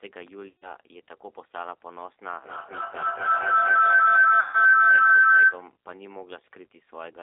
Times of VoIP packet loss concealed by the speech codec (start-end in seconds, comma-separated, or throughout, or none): 0.49-0.75, 4.40-4.55